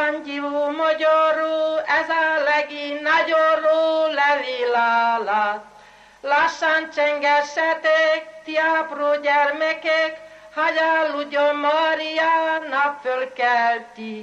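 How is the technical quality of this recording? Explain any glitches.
Listening closely, nothing in the recording stood out as a technical problem.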